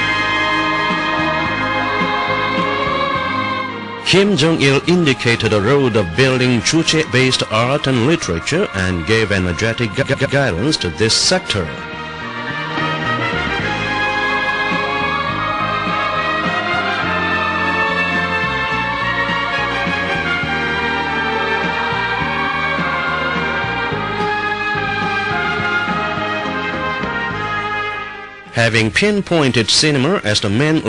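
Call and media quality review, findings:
Repeated frames: stutter at 10.01–10.36 s, a 116 ms chunk looping three extra times, and a short single repeat of 70 ms at 20.67 s. Encoder/transport resending frames.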